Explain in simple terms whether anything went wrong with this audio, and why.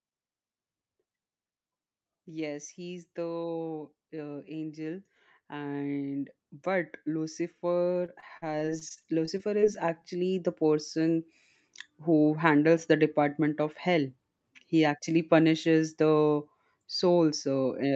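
Two things went wrong. From 2.24 s to 10.93 s, automatic gain rising makes the sound slowly get louder. The gain control thought the input was too quiet. It turned the level up gradually, so the background swells along with the voice.

Between 8.01 s and 9.64 s, repeated packet loss gives a robotic sound. Pieces of audio went missing over a dozen times, each gap under a twentieth of a second. The call filled each hole by stretching the last sound, so it comes out choppy.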